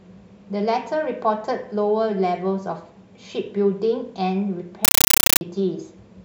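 From 4.85 to 5.41 s, loud chattering static replaces the speech, bursts repeating 31 times a second: a compressed stream played as audio, undecoded AC-3.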